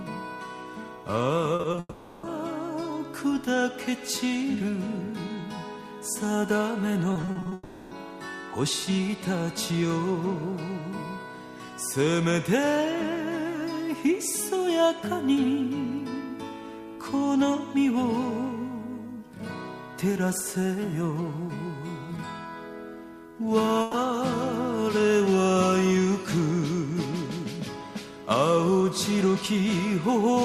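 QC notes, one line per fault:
1.55–1.79 s, repeated packet loss (robotic sound): four quick gaps, longest about 40 ms, each patched by stretching the last sound, so it turns choppy and robotic.
1.79–2.25 s, long network dropout: roughly 440 ms is gone. The stretched sound fades to a brief silence, then picks up later, likely a stalled connection.
7.13–7.53 s, repeated packet loss (robotic sound): seven gaps this time, up to 40 ms each, with about 40% of the stretch filled in, giving the same robotic chop.
7.53–7.93 s, long network dropout: around 380 ms missing. The held sound smears and fades without fully going silent before the audio resumes further on, likely from the link stalling.
23.81–23.95 s, burst of packet loss: about 120 ms dropped in one go. The last sound is held and faded out, and the audio jumps ahead past the missing bit.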